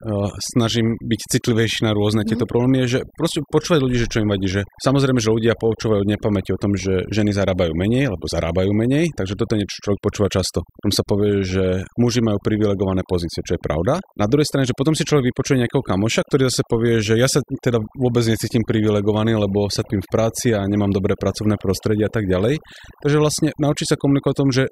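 Throughout the recording, overdone noise removal has been applied: the noise reduction was set far too strong, so every frequency band close to its noise estimate is pulled down or switched off, and the quieter parts of the speech vanish with it. The background drops and breaks up into twinkling specks.

From 19.79 to 19.85 s, just before "v práci a nemám", damaged data in the compressed stream throws the decoder off. It misreads or discards the corrupted frames, loses sync and hunts for the next valid frame header, which is heard as a short glitch lasting about 56 ms.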